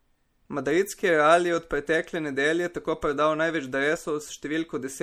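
A speech clip that's been squeezed hard: the whole thing has that watery, swirly texture, with a fizzy edge on the s sounds, likely MP3 compression at a low bitrate, something around 64 kbps, where weak frequency lines keep dropping in and out. Then from 3.93 to 3.98 s, right after "nedelje tako prodal največ", there's a short glitch, which is damaged data in the compressed stream: the decoder hit corrupt frames, lost sync and jumped to the next good header.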